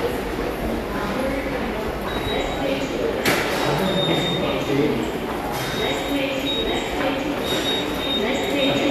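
Nothing technical goes wrong anywhere in these sounds, so there's nothing here worth flagging.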